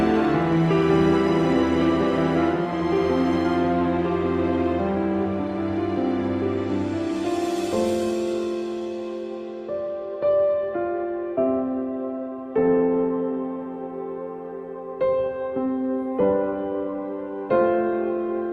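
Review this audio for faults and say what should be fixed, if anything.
Nothing here needs fixing, since no audible faults turn up anywhere in the recording and it can be left as it is.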